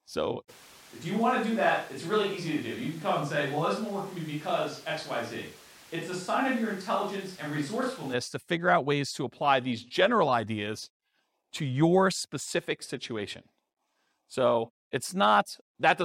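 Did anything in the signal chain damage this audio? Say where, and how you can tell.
Yes. A switch to a distant microphone runs from 0.51 s to 8.12 s, ending just before "to figure out ways". Across that span the speech turns hollow and roomy, loses low end, drops by roughly 5 dB, and carries a background noise floor only about 25 dB below the speech. The abrupt change at both edges points to the capture stage: the close microphone's feed likely dropped out, leaving only a far pickup hearing the room.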